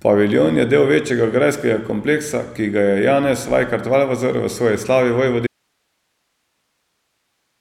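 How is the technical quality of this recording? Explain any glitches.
There's one real problem: an audio dropout to a faint residue from 5.47 s through to the end. The speech cuts off abruptly, leaving only low hiss, something like 55 dB under the signal. The likely cause is the source dropping while the rest of the chain stayed live, passing through its own noise.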